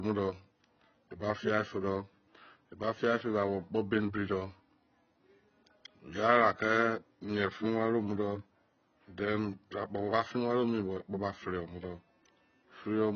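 The converter's sampling clock is being disturbed by periodic clock jitter at around 1 kHz for the whole clip. That wobble in timing modulates every component of the speech, placing sidebands roughly 1 kHz above and below each one. Higher frequencies are affected more strongly. The result is a rough, metallic edge that rides on the voice wherever it sounds and drops away in the pauses, where there is nothing left to modulate.

Also present from start to finish is heavy codec damage. Its likely cause is AAC compression at a low bitrate, with the sound pointing to something around 16 kbps in AAC-LC. The encoder has run out of bits, so the spectrum stops abruptly at about 6.5 kHz, with nothing above it. Within the band the content is coarsely quantised. The speech sounds dull and smeared, with a warbling, fizzy texture on sustained sounds and on sibilants.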